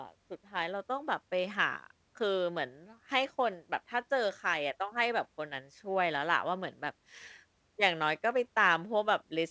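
Nothing stood out on listening to the speech here; the audio carries no content above 8 kHz, consistent with a wideband call path.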